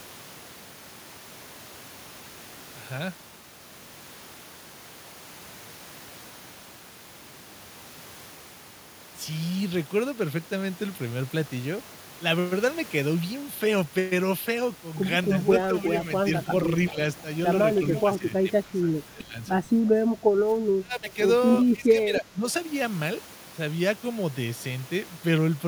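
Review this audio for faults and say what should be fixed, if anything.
Speech suppressed in double talk affects the talker in five stretches: 15.71–16.03 s, 16.9–16.99 s, 18.18–19.34 s, 20.18–21.17 s and 21.75–22.46 s. The level dips, mildly at first and then by roughly 20 dB at worst. Parts of the speech thin out or drop away. The likely cause is overlapping talk. The echo canceller cannot tell the near voice from loudspeaker echo, so it turns both down. A canceller with better double-talk detection would prevent this.

Echo leak appears twice, at 17.77–18.01 s and 21.55–21.6 s. A faint, delayed copy of the speech comes back about 0.31 s late and sits roughly 15 dB below the main voice. The scraps are short. The likely cause is a far-end loudspeaker whose echo canceller left residual pickup in its microphone signal. Using a headset or improving echo cancellation at that end would prevent it.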